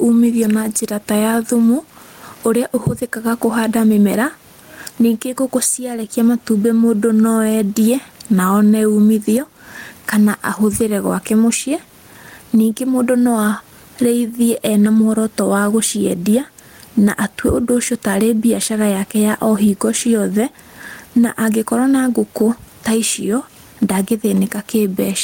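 A speech recording with gain pumping throughout. The room noise sits about 45 dB below the speech, and the gain swings by roughly 15 dB. That points to input gain set far too high with a fast limiter or compressor likely clamping it. A noise gate would do the opposite, cutting the gaps to silence.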